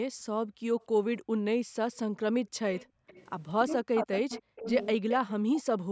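From 0.80 to 1.19 s a faint echo leak appears. A delayed copy of the speech, trailing it by about 0.29 s, sits very low, roughly 35 dB under the direct voice. It is likely residue a loudspeaker-side echo canceller failed to remove. On a spectrogram it shows as a ghostly duplicate of the speech harmonics, shifted right by that fixed offset.

The same 0.29 s echo returns from 2.75 to 3.24 s, now stronger, around 20 dB below the speech. Within it, from 2.91 to 3.07 s, the background is gated by the echo canceller. The room tone drops by about 31 dB for roughly 150 ms and then recovers. The waveform shows the noise floor collapsing to near-silence, and the spectrogram a brief dark vertical gap.

From 3.64 to 5.07 s the speech is suppressed in double talk, likely because the canceller could not tell the near talker from the far-end echo. Across about 0.7 s in total the voice dips by as much as around 40 dB. 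The waveform envelope is notched.

Overlapping this, from 4.35 to 5.62 s, the echo leak is loudest, about 10 dB under the speech. It comes through as a second voice 0.29 s late.

From 5.37 to 5.90 s the background is gated again, for roughly 300 ms, dropping by about 40 dB. It leaves the same dark holes in the noise floor, under a spectrum that stops at 8 kHz throughout.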